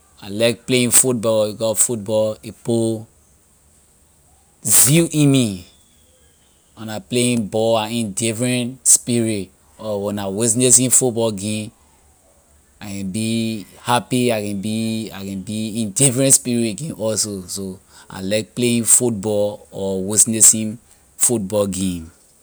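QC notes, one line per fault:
0.94–1.00 s (after "I like playing"), 1.81 s, 4.75–4.83 s, 10.75–10.93 s (after "or when I witness"), 16.33 s, 18.94 s (after "I like playing"), 20.20–20.48 s, 21.23 s, integer overflow: loud peaks wrap to the opposite sign instead of limiting, giving harsh cracks far sharper than clipping.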